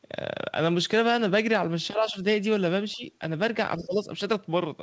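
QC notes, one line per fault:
1.96–2.16 s, 2.95–3.05 s, 3.78–4.07 s: speech suppressed in double talk. Level dips about 5 dB, then about 15 dB twice, likely from echo-canceller ducking during overlapping talk.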